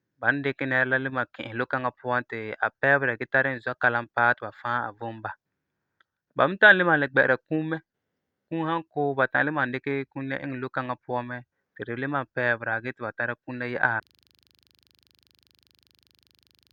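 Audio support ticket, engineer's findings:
Abrupt jump ahead at 13.99 s with a small blip, audio picks up mid-flow. Likely stream segment skipped: one segment failed to load, player continued from the next.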